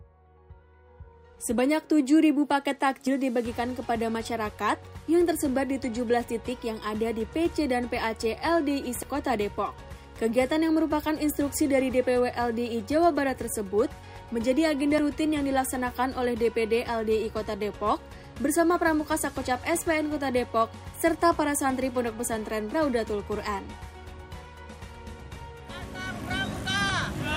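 Short skips at 3.07, 9.03, 14.98, 20.94 and 26.90 s, each dropping roughly 40 ms, point to audio missing between chunks, likely lost at each 6-second chunk handover. The sound jumps abruptly, and the waveform and spectrogram show a hard discontinuity with no silent gap.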